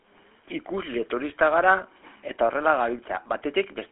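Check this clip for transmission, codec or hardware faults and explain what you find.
The clip shows one fault, present throughout: GSM full-rate codec damage. It is plainly audible. The codec models the vocal tract and excites it with sparse regular pulses, consistent with its 13 kbit/s rate. The sound is buzzy and gravelly, squeezed into a 300 to 3.4 kHz phone band, with nothing above 3.8 kHz.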